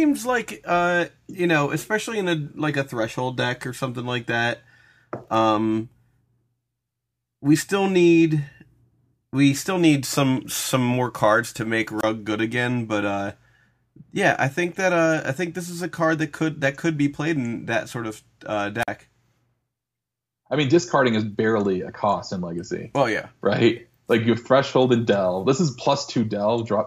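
Speech with a wireless microphone squelch dropout at 11.98 s, after "more cards to make", and 18.80 s, after "that sort of uh". A short hiss swell precedes brief mutes of about 25 and 48 ms, unlike a clean digital gap.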